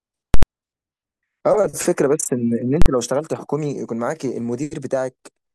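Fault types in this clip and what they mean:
invalid numbers at full scale: A calculation went infinite or invalid and the output pinned to maximum value for a whole block, giving loud bangs near 0.34 s and 2.82 s. Each shows as a flat slab at one extreme on the waveform, lasting about 85 ms and 43 ms (fitting 4096- and 2048-sample blocks), and as bright vertical broadband stripes at each slab's edges on a spectrogram.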